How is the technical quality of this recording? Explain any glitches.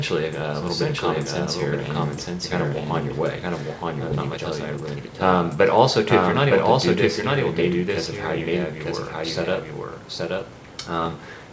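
The recording has three kinds of fault: a second copy running behind the whole way through, one forward jump, and two stretches of hurried playback. It also passed through a call codec, with nothing above 8 kHz, which fits G.722 at 64 kbps.

A doubled audio track runs throughout. This is likely a second capture path, or an edit holding two copies out of step, leaving a full-band duplicate at roughly equal level about a second behind. Everything is heard twice, with a clean, dry repeat and no room colour.

A skip ahead occurs at 4.12 s. The jitter buffer or transport discarded roughly a second of audio that was already queued, with no fill inserted. The sound lurches forward and two non-adjacent moments butt together. The playback delay also drops by about a second.

A jitter buffer speed-up runs from 4.37 to 5.56 s at 121% and from 9.64 to 10.44 s at 112%. After a backlog, the receiver repeatedly snipped out pitch-period-sized pieces, removing about 0.3 s and 0.1 s. 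Pitch holds, but the sound turns rushed.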